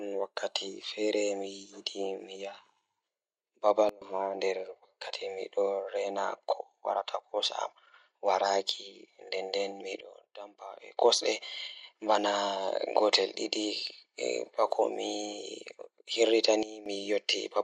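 It's a speech clip, and the level abruptly drops three times: by about 21 dB from 3.89 to 4.02 s, about 18 dB from 10.01 to 10.97 s, and about 14 dB from 16.63 to 16.86 s. Each time the voice and the background noise fall together and then snap back, with no fade. That points to a sudden gain jump, likely a gain setting or bit shift applied from one sample to the next without any ramp.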